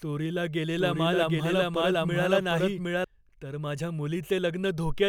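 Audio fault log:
0.78–3.04 s, doubled audio track: a second full-band copy of the speech runs about 0.7 s behind the original at roughly equal loudness, so everything in this span is heard twice, overlapping itself out of step. The late copy carries no decay or added room colour and cuts in and out abruptly at the edges of the span, which points to a likely cause of the audio being captured again through a slower path.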